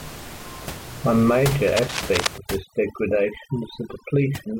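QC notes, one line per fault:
1.67 to 2.27 s, cable scratch noise: for about 0.6 s a dense, uneven scratching and crackling rides over the speech, only a little quieter than the voice itself, so it competes hard with it. The irregular bursts are the sound of contact resistance jumping around as a worn cable, connector or control is moved, most likely a lead being handled or flexed during the take.
2.38 to 4.59 s, overdone noise removal: from this point to the end the gaps between phrases drop to an unnatural near silence sprinkled with small twinkling specks. The room noise, which sits about 13 dB under the speech earlier on, is being fought by noise reduction set far too hard. Frequency bands that dip close to its noise estimate are cut right down, and the quieter parts of the voice are removed along with the noise.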